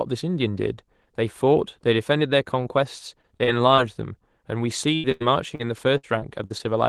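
Repeated packet loss (robotic sound) breaks up this speech at 3.21–3.80 s and 5.97–6.61 s: four short gaps in each stretch (longest 40 and 59 ms) are patched by extending the last sound, leaving it choppy. Two bursts of packet loss at 4.96–5.06 s and 5.12–5.23 s each lose about 80 ms, held as a fading buzz or hiss before the audio resumes further on. A short concealed packet loss at 5.55–5.61 s fills a 40 ms hole, heard as a brief smear. Throughout, the audio has the band-limited character of an Opus call path, fitting a 12 kHz bandwidth at around 20 kbps.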